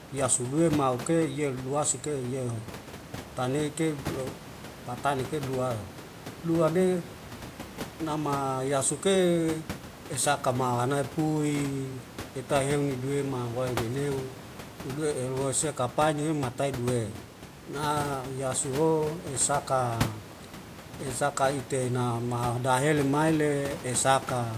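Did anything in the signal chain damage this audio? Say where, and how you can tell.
No, nothing in the signal chain damaged this speech.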